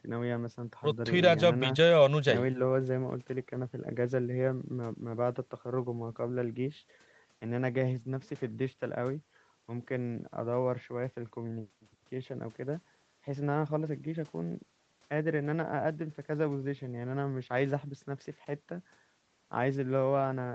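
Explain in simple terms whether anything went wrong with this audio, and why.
Nothing went wrong with this speech recording. It passed through ordinary call processing, which leaves nothing above about 8 kHz, so the sound has the slightly narrower, duller top end typical of an online call.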